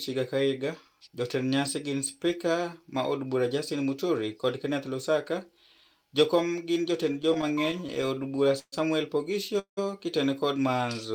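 From 7.13 to 8.74 s there are repeated stalls (stutter): the jitter buffer keeps running dry, so about a fifth of that stretch is filled-in sound, with the longest hold 132 ms. Then at 9.59 s comes a call audio freeze lasting about 0.2 s, likely from packets held up in transit: the sound hangs, fades, goes silent for 100 ms, and resumes later without losing anything.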